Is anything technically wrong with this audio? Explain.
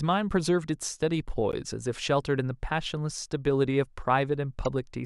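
Yes. Corrupt frame decoded, at 1.52 to 1.54 s and again at 4.65 s. Damaged compressed data was played anyway, putting misplaced energy up to about -15 dBFS across about one frame at 1.52 s and about three at 4.65 s, heard as a chirp, squeak, blip or burst of noise.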